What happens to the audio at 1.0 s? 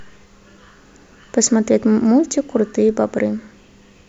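Nothing goes wrong at 1.0 s; the speech carries on intact through that moment, with no dropout, click or distortion.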